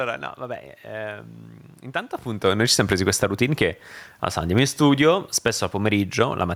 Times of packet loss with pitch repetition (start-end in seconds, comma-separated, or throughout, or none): none